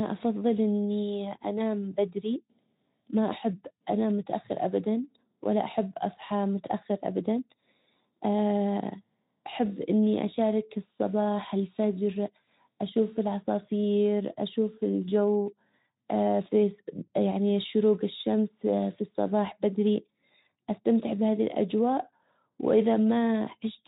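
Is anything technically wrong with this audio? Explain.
No, nothing technically wrong.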